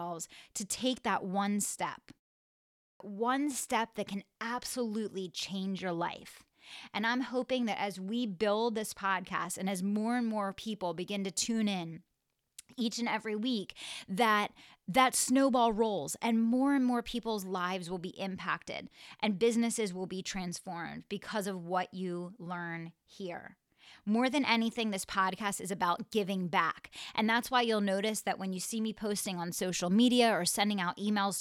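Clipped start after a pause at 2.89 s to 3.00 s: after a silence of about 0.77 s, the output device has apparently dropped into a sleep state and needs about 112 ms to wake, so the onset leading into "one step that can" is swallowed and the speech begins abruptly.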